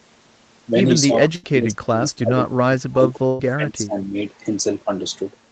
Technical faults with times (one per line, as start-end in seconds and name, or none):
1.06-4.14 speech suppressed in double talk
1.35-1.46 burst of packet loss
3.27-3.42 burst of packet loss